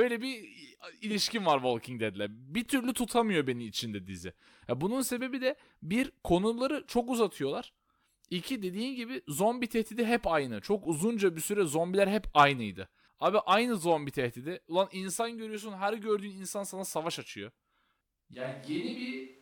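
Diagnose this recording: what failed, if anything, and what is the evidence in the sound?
From 18.35 s to the end, the voice abruptly turns roomy and hollow, loses bass and drops about 5 dB, with room noise only roughly 30 dB below it. This is likely a switch to a distant microphone: the close mic's feed dropped out at capture, leaving a farther mic.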